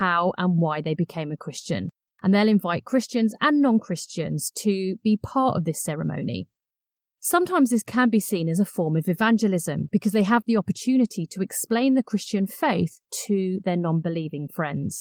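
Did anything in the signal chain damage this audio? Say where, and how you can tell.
No, nothing damaged it.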